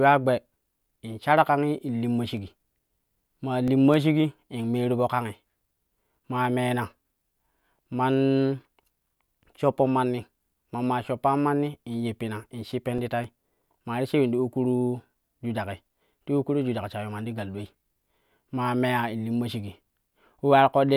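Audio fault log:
2.37–3.94 s: CD scratch ticks, seven short clicks about four a second, each only a few milliseconds, as damage exceeds error correction once per disc revolution.
11.68–13.77 s: CD scratch ticks again, nine at the same rate, ending before "maa ti shiwi ta".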